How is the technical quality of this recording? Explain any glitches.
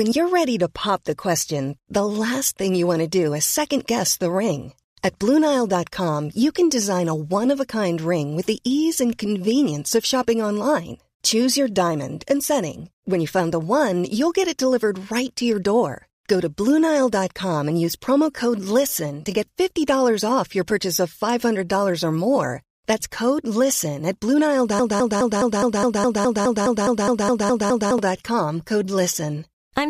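The recording has one clear glitch near the end. From 24.79 to 27.98 s, a broken-record loop replays a 0.21 s fragment 15 times, likely from a stalled stream resending its buffer. The waveform shows identical blocks repeating, and the speech in that span is lost.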